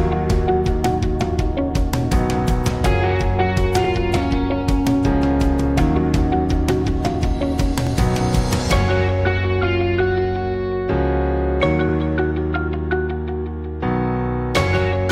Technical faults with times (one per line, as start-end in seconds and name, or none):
3.84-3.87 overlapping chunks
7.87-7.89 overlapping chunks
11.89-11.91 overlapping chunks